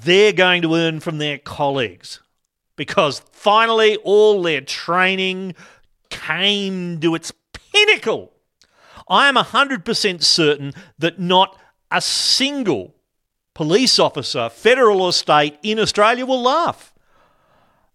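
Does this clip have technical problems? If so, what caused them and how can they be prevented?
No, nothing in this speech recording stood out as a technical problem on listening, so there is no cause to trace or prevention to suggest.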